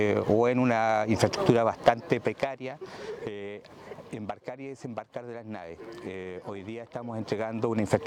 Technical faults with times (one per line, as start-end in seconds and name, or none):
1.88-2.94 zipper noise
6.83-8.06 zipper noise